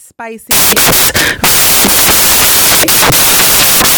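From 0.51 s to the end, the speech turns to loud, harsh broadband noise: samples built from the wrong bytes, low bits promoted to the top of each value.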